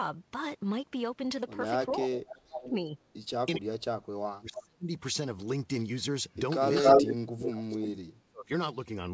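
From 1.91 to 2.7 s an echo leak lets a faint copy of the speech return about 403 ms late, about 15 dB below it. This is likely a loudspeaker echo the far end's canceller missed, and it shows as a weaker, smeared duplicate of the spectrogram pattern.

From 2.03 to 2.98 s, speech suppressed in double talk pulls the talker down by up to about 25 dB for roughly half a second. The likely cause is the canceller ducking both voices while they overlap, which shows as a waveform envelope that suddenly collapses.

From 3.45 to 4.91 s the same suppression goes deeper, up to about 40 dB across roughly 1.5 s. The waveform has near-silent gaps, and the harmonics fade out of the spectrogram. Inside this stretch, from 4.55 to 4.63 s, a brief echo scrap appears, delayed about 243 ms and about 10 dB below the speech.

From 6.61 to 7.1 s the echo leak with the same 243 ms delay is about 10 dB louder than the speech itself, a strong ghost copy of the spectrogram pattern, likely from a leaking loudspeaker path. 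Overlapping it, from 6.81 to 8.51 s, double-talk suppression cuts in again by up to about 35 dB, chopping roughly 1.5 s of speech. A last echo scrap at 7.42 to 7.48 s sits about 5 dB below the speech.

Throughout, the G.722 call path leaves nothing above 8 kHz in the spectrogram.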